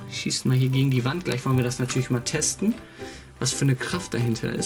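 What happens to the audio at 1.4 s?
At 1.4 s you're hearing a resampler restarted on every block. Each 10 ms block is converted from 24 kHz to 48 kHz in isolation, so every edge leaves a small glitch, giving a 100 Hz buzz under the sound throughout.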